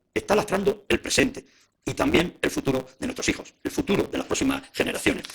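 Throughout the sound there is a steady buzz at 138 Hz, and everything runs 1.6 times too fast while keeping about its normal pitch. That is a block size mismatch (truncated). One stage writes longer blocks than the next reads, which fits 512-sample written blocks, so each block's tail is dropped. A repeated buffer stutters from 1.21 to 1.23 s, playing an 11.61 ms piece four extra times and losing about 50 ms. Single repeats at 2.70 s and 4.08 s sound as a click or brief buzz. The device replayed its last buffer, which fits a 512-sample buffer.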